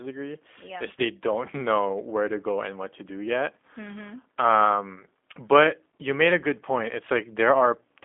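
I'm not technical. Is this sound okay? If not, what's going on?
No. Throughout the clip, the speech has been through the G.729 codec, a low-quality compression scheme used for internet phone calls. It doesn't store the sound itself; it keeps a rough description of how the voice was shaped and rebuilds an approximation at the other end. The result is plainly audible: a slightly rough, synthetic edge to the voice, and a narrow, telephone-like tone, since only frequencies from about 250 Hz to 3.5 kHz get through.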